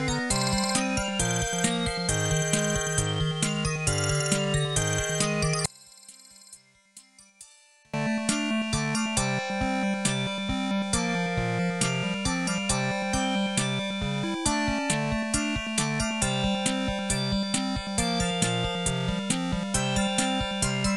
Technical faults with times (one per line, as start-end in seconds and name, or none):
5.66-7.94 one channel inverted